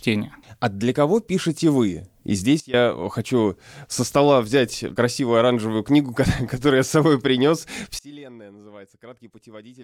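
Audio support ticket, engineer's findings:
Sudden gain jump, 2.60–2.74 s: speech and noise floor drop together by about 18 dB in a single step, recovering before "хочу со стола взять". Likely an unramped digital gain change.

Sudden gain jump, 7.99 s to end, after "я с собой принес": same step, about 24 dB down, never restored. Not AGC or a fade: no ramp, and the background falls with the speech.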